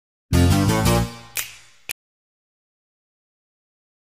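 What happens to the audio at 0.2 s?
Nothing goes wrong at 0.2 s; the audio plays through that moment intact, with no dropout, click or distortion to be heard.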